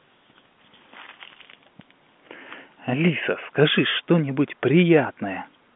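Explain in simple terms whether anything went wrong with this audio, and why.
Nothing went wrong with this speech recording. It has passed through ordinary G.711 telephone coding, which is why it sounds like a phone call: nothing above about 3.7 kHz gets through, and the deepest bass is trimmed away too.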